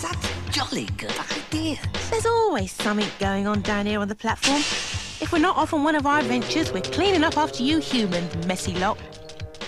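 No technical faults can be heard anywhere here.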